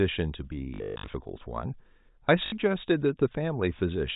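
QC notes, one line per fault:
0.74 to 1.14 s, packet loss with last packet repeated: about 300 ms of gaps scattered over 400 ms, the longest run 140 ms. The same short chunk replays, fitting 20 ms packets, so runs buzz robotically near 50 Hz. The spectrogram shows frozen harmonics, and the waveform shows a repeating tile.
2.46 to 2.52 s, packet loss with last packet repeated: a 60 ms repeat makes a brief stutter, with a frozen patch heard through the narrowband G.711 telephone sound.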